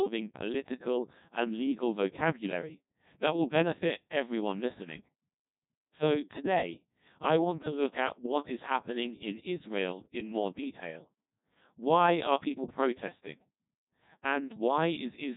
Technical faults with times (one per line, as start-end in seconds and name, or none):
0.00-15.36 Codec 2 vocoder